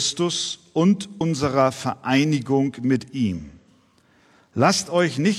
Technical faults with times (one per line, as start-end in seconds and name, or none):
1.16-1.21 damaged data in a compressed stream
3.35-3.41 damaged data in a compressed stream